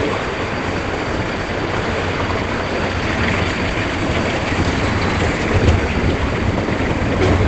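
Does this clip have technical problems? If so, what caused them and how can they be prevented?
Yes. Across the whole clip the sound is muffled and hoarse, with nothing above about 8.8 kHz, and the codec damage is plainly audible. That's most likely Opus compression pushed into its speech-oriented SILK mode at wideband, which suggests a low bitrate of around 16 kbps. At that rate the encoder drops the top of the spectrum and models everything as if it were speech, so non-speech sound comes out dull and rough. To prevent it, encode at a higher Opus bitrate and force the music (CELT) mode so the full bandwidth survives.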